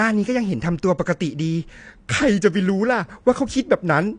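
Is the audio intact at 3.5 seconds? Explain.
No, AAC compression affects the whole clip: nothing above 9.8 kHz and a smeared, warbly texture, likely from coarse low-bitrate quantisation around 32 kbps.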